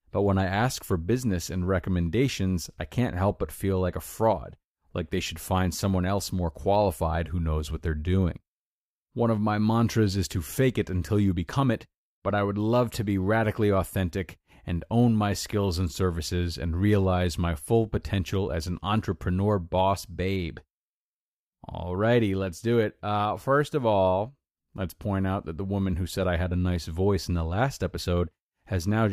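Nothing stood out on listening to this speech recording.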